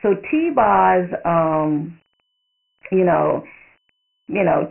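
From start to finish it's Dialogic VOX ADPCM: nothing above 3 kHz, which points to 4-bit samples at 6,000 a second, and heavy gritty hiss riding the speech.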